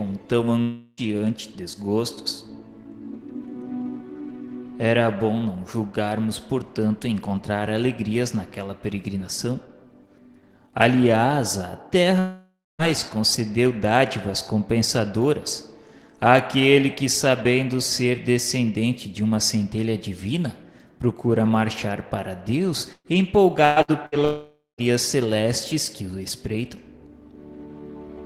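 Three gaps sound like a long network dropout, likely from the connection stalling, at 0.61 to 1.00 s, 12.19 to 12.82 s and 24.25 to 24.93 s. In each, the last sound is stretched into a fading buzz or hiss, and then the audio resumes with 0.36, 0.6 and 0.54 s missing. On a spectrogram, the held spectrum appears as horizontal streaks that dim. The second and third gaps end in blank dark bands of about 0.22 and 0.16 s. A burst of packet loss hits at 22.93, 23.65, 23.82 and 24.06 s. In the first two, 120 ms of audio disappears; in the last two, 60 ms. Each gap is concealed by a brief repeated tail that fades before the audio jumps ahead, seen in the waveform as short smooth decaying patches with an abrupt restart. Only the first includes a silent stretch, about 30 ms.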